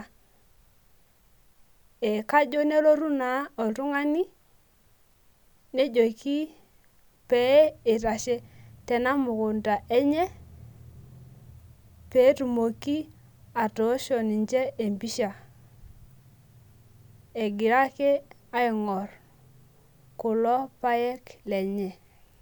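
No technical faults turn up anywhere in the recording. Nothing in the speech calls for a time stamp or a description.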